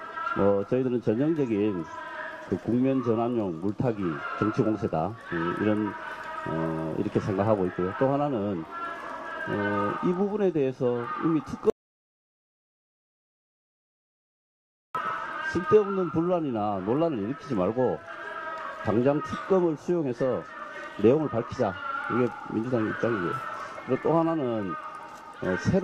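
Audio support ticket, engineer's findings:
Audio dropout to silence, 11.70 s to 14.95 s. Sound cuts off abruptly mid-flow and returns just as abruptly after 3.25 s of dead silence, with no room tone or noise floor in the gap. Content in that span unrecoverable. Likely cause: input lost upstream (device disconnect, failed link or accidental mute) while the recorder/encoder kept writing silence.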